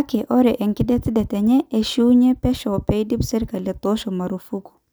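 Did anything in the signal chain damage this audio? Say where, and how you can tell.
No, nothing in the signal chain damaged this audio.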